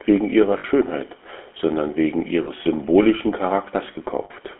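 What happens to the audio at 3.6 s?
At 3.6 s the speech carries the GSM full-rate codec's buzzy, gravelly roughness, present throughout. Pulse-driven excitation creates that grit, unlike plain 250 Hz to 3.4 kHz band-limiting, which only muffles.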